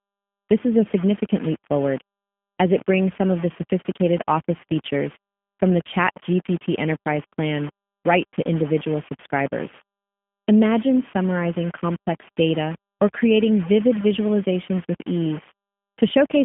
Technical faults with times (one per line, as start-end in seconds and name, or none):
0.00-16.44 low bit depth without dither
0.00-16.44 G.729 codec